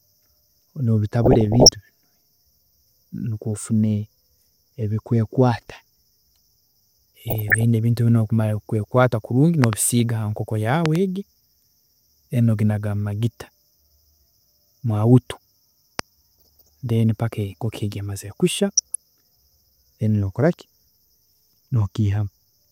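This is a speech recording with two separate problems. The first is DAB burbling at 1.23–1.69, 7.27–7.63, 9.87–10.00 (just after "kweekwaata kurungi"), 16.39–16.69 (right before "then paka") and 18.69–18.95 s. These are short bubbly, squelchy patches where bit errors, around half a percent, slip past the error correction and make individual sub-bands jump in level frame by frame. The second is a set of loud pops, peaking about 20 dB above the signal. There are double pops at 9.64–9.75 (also after "kweekwaata kurungi") and 10.86–10.98 s, and a single pop at 15.99–16.01 s. The speech carries on underneath them. The likely cause is a voltage spike from a switch, plug or static.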